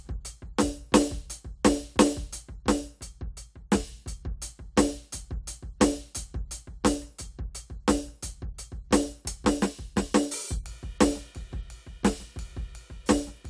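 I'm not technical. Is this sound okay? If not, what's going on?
Yes, this music recording has no audible technical faults.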